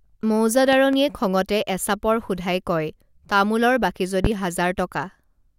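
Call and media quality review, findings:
Loud pop, two events over continuing speech. 0.73–0.97 s: double pop, about 10 dB above speech, just before "খঙতে এচাপৰ". 4.25–4.28 s: single pop, about 15 dB up, after "তামোলৰ বাকী". Likely a voltage step from a connector, switch or static entering the chain.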